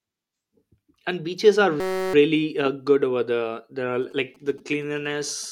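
From 1.80 s to 2.14 s the speech gives way to a system hang loop. The driver or host stalled while the audio hardware kept replaying the same 5.33 ms segment of its ring buffer, which fits a 256-sample buffer. Repeating that short slice about 63 times at 188 Hz produces a steady, flat buzz at that pitch in place of the speech. Little or no audio is lost once playback resumes, so the speech picks up where it left off.

From 4.02 s to the end of the clip, GSM signalling bursts appear. A nearby 2G handset was signalling rather than carrying a call, sending short clusters of radio bursts. The audio circuitry rectified them into a galloping dit-dit-dit pattern of brief 217 Hz buzzes. They sit roughly 30 dB below the speech, so they form a faint rhythmic chatter underneath it.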